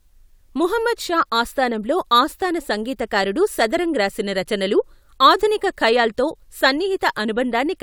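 No technical faults can be heard in this recording.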